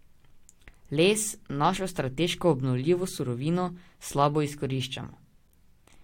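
A tiny skip in the speech at 1.77 s, just before "strateško obnovljivo surovino slabo", comes from overlap between stream segments, where a few milliseconds were cut away.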